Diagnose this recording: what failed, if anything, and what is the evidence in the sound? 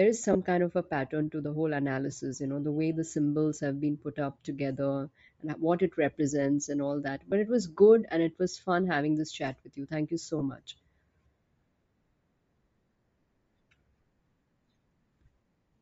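Throughout, the speech has a breathy, grainy top end with noise-filled treble, most likely Bluetooth LC3 compression at the codec stage, consistent with a low bitrate around 32 kbps.

Brief noisy smears at 0.33–0.35 s (before "kind of a pattern"), 5.27 s, 7.31 s and 10.39–10.42 s are lost LE Audio frames on the network link, with the decoder filling each gap with recycled spectrum.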